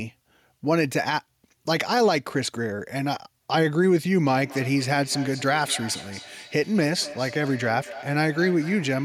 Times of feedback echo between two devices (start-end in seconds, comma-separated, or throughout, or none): 4.27-9.04